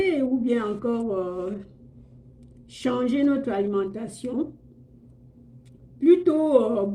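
Nothing stands out here at all, and the audio just runs along without a single glitch worth pointing to.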